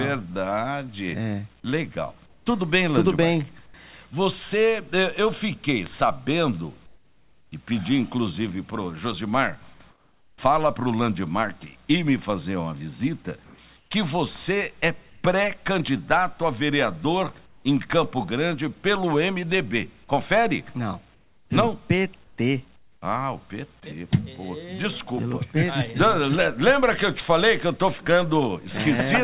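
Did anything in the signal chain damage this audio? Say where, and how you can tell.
Yes. In the call processing stage, the background in pauses at 2.26, 3.66, 6.86, 9.9, 13.44, 15.1, 17.46 and 21.14 s (longest 21.14 to 23.02 s) turns into steady, featureless noise, mostly about 3 to 7 dB quieter. This is likely comfort noise in place of the background: discontinuous transmission halted and the receiver synthesised filler.

A bit error spike on storage or a digital link is audible at 5.86 s as one sharp broadband tick unrelated to the surrounding sound. It spans three samples: a flipped bit shifted the sample values by a power of two before they snapped back.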